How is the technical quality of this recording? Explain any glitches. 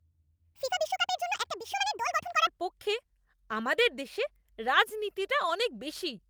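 The opening contains one clear glitch. From 0.00 to 2.47 s, a section at the wrong speed plays at 1.73 times normal, likely from a clock mismatch. Pitch rises about ten semitones and pacing hurries, unlike a pure pitch shift.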